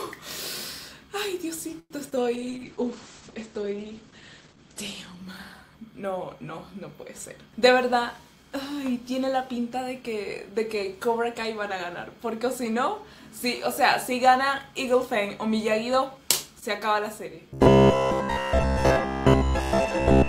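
The audio has four distinct faults. At 1.79 to 1.92 s there is a call audio freeze: the sound stretches into a fading fill, ending in about 40 ms of silence, then resumes without loss, likely from a jitter-buffer underrun that adds a 108 ms delay. From 2.35 to 7.35 s a call bitrate drop takes the stream from 128 to 10 kbps, holding the lowest rate for about 2.2 s, with the bandwidth narrowing from 20 kHz to 8 kHz, so the sound becomes coarse and muffled. Between 7.46 and 9.11 s a jitter buffer speed-up plays the audio at 106% speed with unchanged pitch, trimming about a tenth of a second of built-up delay. From 17.50 s to the end at 20.28 s the sound turns into a rigid 66.7 Hz metallic buzz, robotic sound from repeated short buffers, likely caused by a 15 ms block being replayed for most of that stretch while the real audio is skipped.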